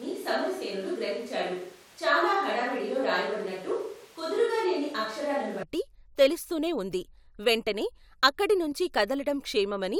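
From the start until 5.63 s, the speech sounds roomy and hollow, thin in the bass, roughly 5 dB quieter, with background noise sitting only about 25 dB below the voice. That points to a switch to a distant microphone, likely because the close mic's signal was lost. Unlike added reverb or a low-cut filter, the noise floor jumps along with the tone, and everything snaps back to close, full sound right before "తెలుస్తూనే వుంది వెంటనే అక్కడి".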